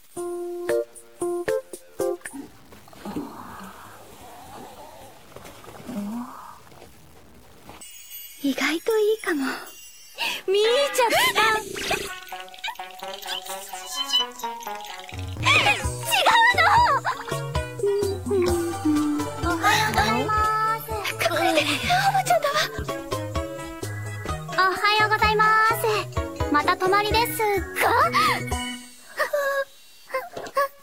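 From start to finish the sound carries a grainy, gritty distortion that rises and falls with the material. The likely cause is low bit depth without dither, with samples truncated to roughly 8 bits, leaving error around 30 dB below the signal. Because the error tracks the waveform, quiet passages sound roughest. Dithered reduction would instead leave a constant, even noise floor.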